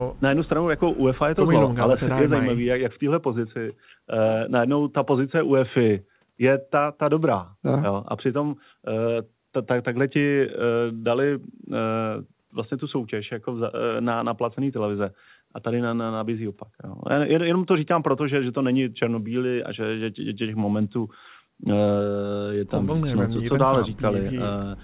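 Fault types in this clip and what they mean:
No fault types are present in this clip, so there are none to explain.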